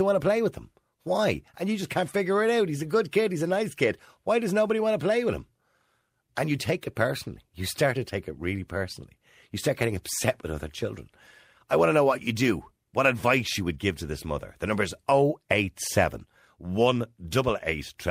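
Nothing in the speech stood out as a technical problem on listening.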